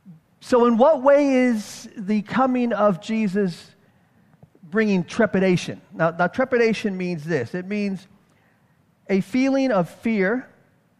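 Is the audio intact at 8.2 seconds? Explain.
Yes, the audio at 8.2 seconds is intact, with no dropout, click or other fault at that point.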